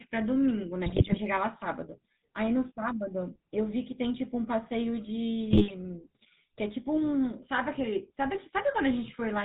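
A buzzy, gravelly roughness runs through the whole of this speech recording, with nothing audible above 4 kHz and the damage plainly audible. That sound fits the GSM full-rate codec at 13 kbps. It rebuilds the voice from a vocal-tract filter driven by regularly spaced pulses and keeps only one in three excitation samples, so the fine texture of the voice becomes a coarse, rasping buzz. At 0.86–1.19 s, and again at 5.51–5.71 s, the voice breaks into squawks, pops and gargling. These are GSM bit errors. Corrupted bits reach the decoder and scramble the filter, pitch and gain values for individual frames, which bends the spectrum and throws the level around. The first burst lasts about a third of a second and has the higher error rate, around 2.5% against roughly 1.4% for the shorter second burst.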